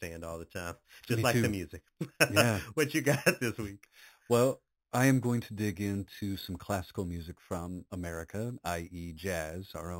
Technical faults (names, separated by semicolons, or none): imaging from sample-and-hold upsampling